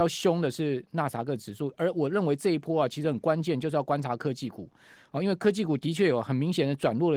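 Nothing goes wrong anywhere in this speech clip; the Opus voice compression behind it sounds like the hybrid, fullband kind with only light coding wear, which fits a rate somewhere around 20 kbps.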